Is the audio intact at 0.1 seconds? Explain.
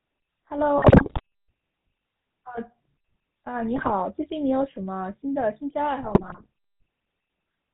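No. At 0.1 s the speech is already passing through the GSM full-rate codec, which affects the clip from start to finish. The codec models the vocal tract with a short filter and drives it with a regular train of pulses, keeping only one excitation sample in three and discarding everything above 4 kHz. The damage is plainly audible as a dull, band-limited sound with a buzzy, gravelly roughness, consistent with a 13 kbps GSM link.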